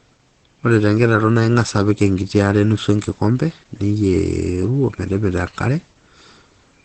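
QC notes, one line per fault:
Throughout, Opus compression: the speech is muffled and hoarse, with nothing above 8.5 kHz. This is likely a heavily squeezed Opus stream running its SILK speech mode at wideband, which fits a bitrate around 12 kbps. The sound is hoarse rather than swirly, so it is not MP3. The hoarseness also sets it apart from a plain low-pass filter, which would only dull the sound.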